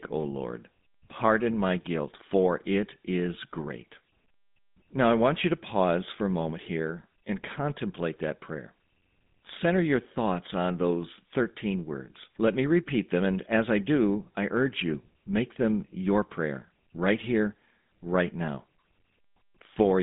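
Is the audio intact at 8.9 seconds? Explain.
No, at 8.9 seconds you're hearing GSM full-rate codec damage, which runs through the whole clip. The speech is squeezed into a roughly 150 Hz to 3.7 kHz phone band with nothing above 3.8 kHz, and the pulse-driven excitation leaves a clearly buzzy, gravelly texture that fits a 13 kbps GSM stream.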